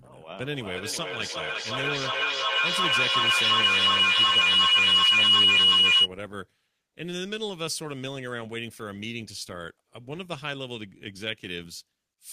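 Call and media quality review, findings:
Feedback howl, 0.51–6.13 s. Tone near 3 kHz peaks about 13 dB above speech, loop repeat delay roughly 400 ms. Probable component: two devices joined to the call in one room. Acoustic loop gain exceeds unity; repeats grow, narrowing to the loop's favoured frequency.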